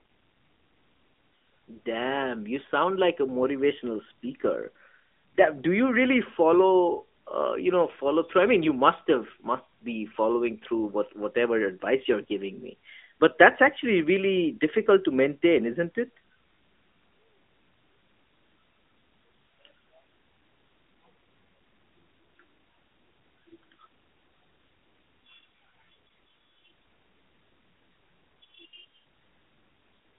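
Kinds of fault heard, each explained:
AMR narrowband mobile codec: The whole clip carries this mobile speech coding, with the line band running about 200 Hz to 3.5 kHz and nothing above 3.6 kHz. The vocal-tract model rebuilds each 5 ms from a few pulses, so the speech sounds plainly buzzy and synthetic, which fits a mid-range rate near 10 kbps. A simple telephone band-pass filter would only sound narrow and muffled, without this artificial, reconstructed texture.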